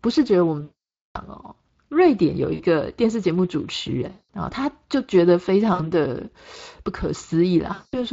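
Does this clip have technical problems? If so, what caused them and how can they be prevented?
Yes. The speech sounds hoarse and noisy throughout, with a grainy edge. This is Speex codec damage: at about 20.6 kbps this CELP coder has too few bits to model the excitation faithfully, so the voice's texture is replaced by a coarse approximation. Encoding at a higher Speex quality setting, or switching to a modern codec such as Opus, would prevent it.

At 0.61 to 1.18 s, 2.53 to 2.63 s, 4.11 to 4.31 s, 5.73 to 5.92 s and 7.73 to 7.97 s, the sound smears into a fading buzzy tone or coloured noise, and the longest gap, 0.57 s, comes near the start. This is VoIP packet loss concealed by the speech codec. With packets missing, the decoder kept repeating its last pitch and filter at a lower gain each frame. A better network path, a larger jitter buffer, or forward error correction would prevent it.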